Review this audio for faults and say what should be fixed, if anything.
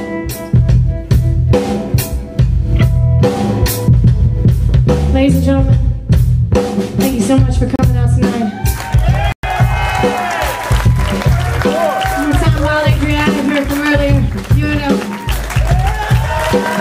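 Two short dropouts to dead silence: a brief one from 7.76 to 7.79 s (32 ms) and a longer one from 9.32 to 9.43 s (112 ms), each picking up again where the sound left off or slightly later. That pattern points to a likely Bluetooth stall, where radio interference delayed packets, the headphones' buffer emptied, and playback froze until the retransmissions caught up. To avoid it, keep the phone close with a clear line of sight and away from busy 2.4 GHz sources.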